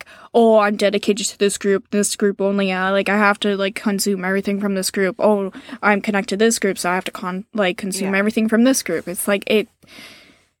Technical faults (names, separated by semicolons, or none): none